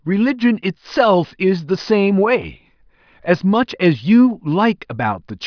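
No technical faults can be heard anywhere in the speech.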